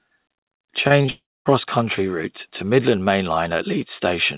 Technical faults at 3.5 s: none

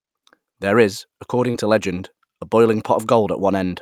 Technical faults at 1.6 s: short concealed packet loss

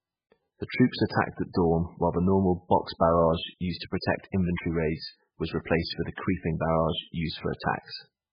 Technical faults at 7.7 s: MP3 compression

